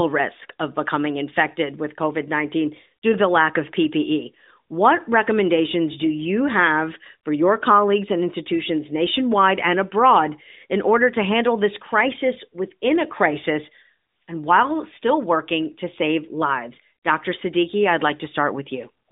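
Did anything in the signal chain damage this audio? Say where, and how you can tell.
No, nothing in the signal chain damaged this audio.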